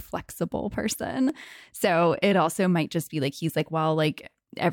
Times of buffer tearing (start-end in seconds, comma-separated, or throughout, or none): none